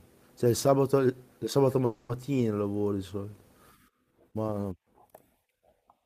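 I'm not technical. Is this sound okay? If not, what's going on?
No, there's a call audio freeze from about 1.85 to 2.11 s. The speech stalls and the last sound is stretched into a fading buzz for roughly a quarter second. Nothing gets lost, though; it picks up where it stopped, just late, likely because network data arrived late.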